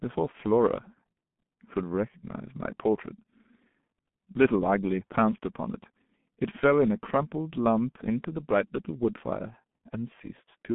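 From start to finish the speech passes through a heavily compressed G.723.1 codec, band-limited to about 150 Hz–3.5 kHz with nothing above 3.8 kHz. It sounds muffled and hoarse with smeared consonants, consistent with a 6.3 kbit/s rate.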